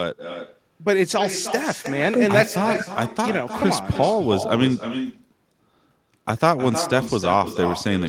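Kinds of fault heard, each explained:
Echo with no canceller: the far end is playing the call out of a loudspeaker, their microphone is catching it, and nothing is stripping it back out, so the talker's own speech comes back after the network round trip. Here it runs through the whole clip, with every phrase trailed roughly a third of a second later by a copy sitting about 9 dB down that sounds thinner than the original.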